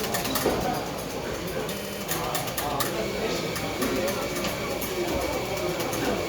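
At 1.77 s the sound stutters through to 2.01 s. This is repeated frames. An 80 ms block of compressed data was played three extra times, which fits a run of about four frames sent again. The decoder loops it, stretching the audio by 240 ms.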